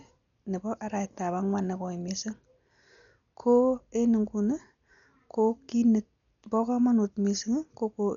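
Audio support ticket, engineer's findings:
Dull, band-limited speech throughout. Nothing above about 6.9 kHz. Heavy codec damage: rough, fluttering noise clinging to voiced tones. Likely Dolby Digital compression. Encoder starved of bits, consistent with roughly 48 kbps. Upper band cut, many frequency lines left without mantissa bits. Decoder fills those gaps with dither noise, giving the grainy flutter.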